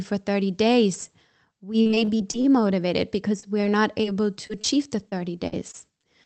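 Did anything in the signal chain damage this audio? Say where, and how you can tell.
Yes, the damage comes from the network side of the call. Right after "days we", from 1.81 to 2.46 s, the sound turns choppy and robotic, with gaps up to 40 ms. Lost packets keep getting patched by stretching the last sound, so about a third of that span is filler. The same happens more lightly at 3.40–4.15 s and 5.10–6.26 s.

There are also two isolated dropouts at 4.47–4.51 s and 4.61–4.66 s, where about 20 ms never reached the decoder. Each is heard as a brief smear or wobble where the receiver guessed the missing bit from what came before, then blended back into the real signal. These are short concealed packet losses.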